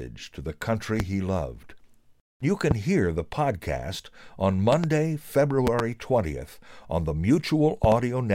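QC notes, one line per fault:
1.00–1.03 s, 2.71–2.74 s, 4.73–4.86 s, 5.67–5.82 s, 7.84–7.95 s, loud pop: sharp pops jump some 15 dB above the speech, which carries on underneath. The first two are single pops, the last three double pops. The likely cause is a sudden voltage pulse, from a plug, switch, static or driver glitch, entering the signal path.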